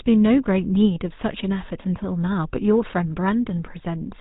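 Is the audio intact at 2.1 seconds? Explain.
No. GSM full-rate codec damage runs through the whole clip, so 2.1 s is affected along with everything else. This codec models the speech as a vocal-tract filter driven by a coarse train of regularly spaced pulses, keeping only every third excitation sample, and it passes nothing above 4 kHz. The damage is plainly audible: the speech sounds band-limited and carries a buzzy, gravelly roughness, which fits the 13 kbps GSM full-rate codec.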